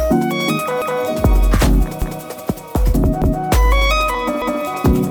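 Overlapping chunks appear at 0.82–1.02, 2.02–2.22, 3.22–3.42 and 4.42–4.62 s. The audio was handled in 1-second chunks, and each new chunk began 200 ms before the previous one had finished, so the last 200 ms of material plays a second time at every join. The result is a regular stutter, with a short stretch of sound repeating about every 1.2 s.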